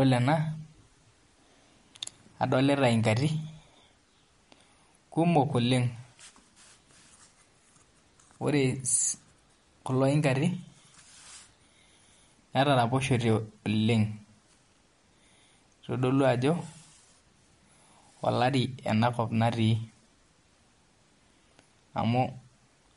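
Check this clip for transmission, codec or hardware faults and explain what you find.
One fault runs through the whole clip: MP3 compression, audible from start to finish. The treble stops dead at about 11.2 kHz, and quieter frequency detail flickers in and out, giving the speech a watery, swirly quality with chirpy s sounds and blurred consonant onsets. The likely cause is an encoder that was short of bits and so dropped the top band and zeroed weak lines frame by frame, which fits a low rate near 48 kbps. A spectrogram would show a flat ceiling at 11.2 kHz and patchy, blocky holes below it.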